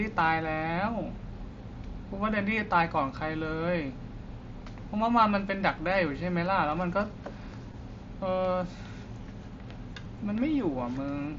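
At 7.72 s and again at 10.05 s the speech has a tiny blip, about 15 ms and 7.5 ms long, the second nearly hidden. This is concealed Bluetooth headset packet loss: audio dropped on the mSBC link, and the receiver patched each gap with a repeated matching stretch of recent waveform.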